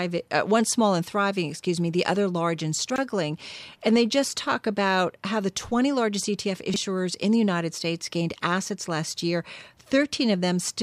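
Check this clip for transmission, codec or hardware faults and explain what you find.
Two brief scrambles in the speech, both the same fault. Chunks out of order at 2.9 to 2.98 s, after "the other large and", and 6.7 to 6.76 s, before "in the": a 20 ms chunk plays three, then two, chunks late. Nothing is lost, but the reordering leaves three hard joins each time, heard as a jumbled flicker.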